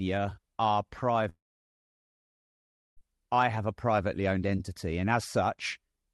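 Speech cuts out at 1.29 s. The last sound is carried on briefly as a fading buzz or hiss, then about 1.6 s of near silence or low steady noise follows. Speech returns at 2.99 s with roughly 1.7 s of material simply gone rather than delayed. That pattern points to a likely long network dropout, with the receiver concealing the gap until packets resumed. The call went through the Opus codec, which adds its usual coding noise and limits high frequencies near 12 kHz.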